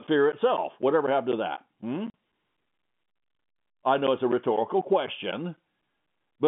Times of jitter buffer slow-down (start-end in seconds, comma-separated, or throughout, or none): none